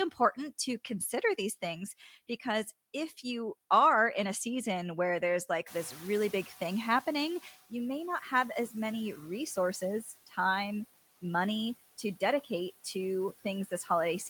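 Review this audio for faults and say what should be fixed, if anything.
Noise suppressor artifacts run through the whole clip. The suppressor lowers each band it judges to be steady noise, frame by frame, by about 14 dB. As a result, the background sinks between words and comes back up underneath them. Prevention: use gentler reduction with smoother gain changes across frames and bands.

Noise suppressor catching up occurs from 5.66 to 7.55 s. Near 5.5 s the room noise rises by about 19 dB, though it still sits about 18 dB below the speech. The suppressor's noise estimate needs 1.89 s to follow, so the louder noise passes through at first and then sinks by about 10 dB. Prevention: let the noise estimate track sudden level rises faster.

Speech cut by the noise suppressor happens from 13.66 to 13.9 s. The suppressor mistakes part of the speech for noise and turns it down with the background by as much as about 11 dB. 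Around a tenth of a second of speech sounds swallowed. Prevention: protect speech-like energy from the noise estimate by using a more conservative speech-presence decision.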